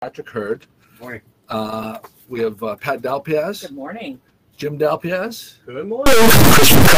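A stuck bit, most likely a high-order data bit held at a fixed value by a broken line or converter, corrupts the last part of the audio, from 6.06 s to the end. About half the samples are pushed off by that bit's weight, a step of roughly -5 dBFS, which points to one of the top bits. That large, waveform-driven error turns the sound into harsh, buzzy distortion, and any quiet passages fill with loud noise as small values cross zero.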